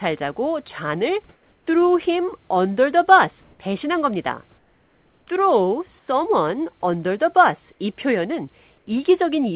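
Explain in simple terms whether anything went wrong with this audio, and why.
In the pauses at 1.34–1.67, 3.44–3.59 (between "under the bus" and "배신한 겁니다"), 4.58–5.27, 5.99–6.08 and 8.78–8.87 s, the real background turns into a flat, even hiss, slightly quieter, except at 3.44, where it's slightly louder. This is comfort noise in place of the background, likely because the call stopped sending sound during silence and the receiving end filled the gaps with made-up noise.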